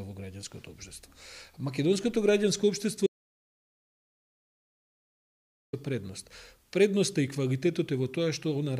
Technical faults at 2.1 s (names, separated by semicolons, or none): none